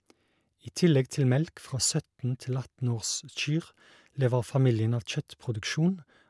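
No technical faults can be heard anywhere in the speech. Nothing in the audio points to a problem with how it was captured or delivered.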